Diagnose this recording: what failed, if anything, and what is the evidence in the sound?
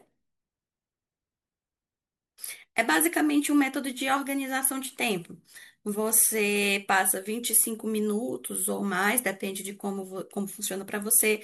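Nothing in the signal chain has failed: the speech arrives intact and continuous, with no audible break, distortion or corruption at any point to trace back to a faulty stage.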